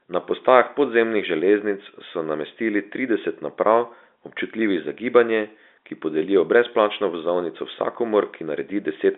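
No faults can be heard in this speech, which comes over a telephone line with G.711 coding, its sound confined to roughly 250 Hz to 3.6 kHz, within the 4 kHz limit that format's 8 kHz sampling sets.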